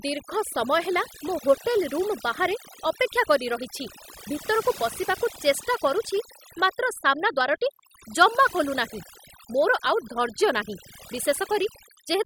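Throughout the speech, the background sinks to near silence scattered with twinkling specks. This is overdone noise removal: reduction set too aggressively switched off frequency bands close to the noise estimate, taking quieter parts of the voice along with them.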